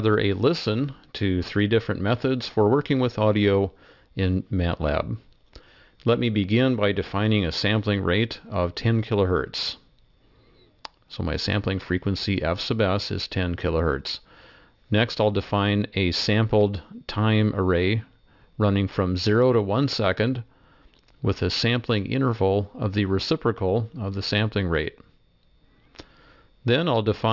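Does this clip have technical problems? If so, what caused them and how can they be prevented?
Yes. Aliasing runs through the whole clip. The audio was resampled to a lower rate without an adequate anti-aliasing filter, which points to a drop from 44.1 kHz to 12 kHz. Content above the 6 kHz folding point mirrors back below it as unrelated, inharmonic tones, giving sharp sounds a gritty, metallic edge. The folded components sit at roughly 20 dB below the signal. Prevention: low-pass filter below the new Nyquist frequency before downsampling.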